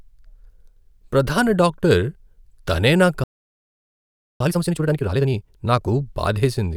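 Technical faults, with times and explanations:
3.24–4.40 s, playback stall: right after "తనే నా" the speech cuts out mid-flow and the output stays silent for about 1.16 s before resuming. The likely cause is the player running out of buffered data or its audio thread being blocked until it recovered.
4.40–5.56 s, time-compressed catch-up: once output resumes after "తనే నా", the speech runs at roughly twice normal rate for about 1.16 s while pitch stays unchanged. Short segments are being dropped and cross-faded to clear the backlog the stall built up.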